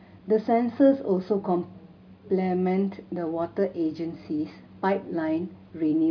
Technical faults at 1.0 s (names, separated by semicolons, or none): none